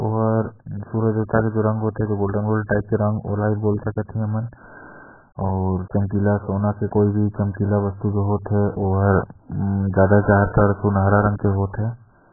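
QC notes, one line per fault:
throughout, AAC compression: nothing above 1.7 kHz, with warbling, smeared speech unlike a clean low-pass; likely AAC-LC at a very low bitrate, around 8 kbps.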